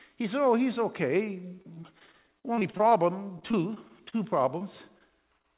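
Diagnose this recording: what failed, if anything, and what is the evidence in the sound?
Network stage, repeated packet loss (robotic sound). From 1.56 to 2.93 s, 14 gaps were patched, the longest 41 ms, covering about 20% of the span. From 3.39 to 4.17 s there were 5 gaps, the longest 29 ms. Each hole is filled by extending the previous sound, so the audio turns choppy with pieces missing.

Network stage, short concealed packet loss, at 4.59 s, 4.98 s, 5.38 to 5.54 s and 5.42 s. Each is about 20 ms missing, filled with continued sound and then blended back. They come through as brief smears or wobbles over the 4 kHz-limited G.711 band. The 5.38 s event also adds a little delay.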